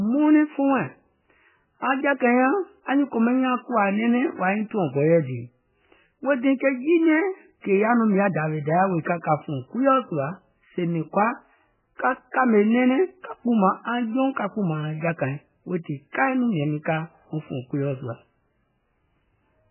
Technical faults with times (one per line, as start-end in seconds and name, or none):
0.00-19.70 MP3 compression